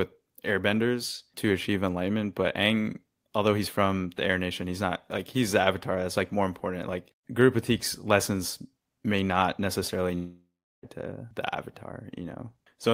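Speech that breaks off after "lessons may not necessarily" at 10.15 s: the last sound stretches into a fading buzz, then about 0.36 s of silence, before the audio resumes at 10.85 s with "to the", about 0.68 s of speech gone. This is likely a long network dropout, with the receiver briefly papering over the gap before falling silent.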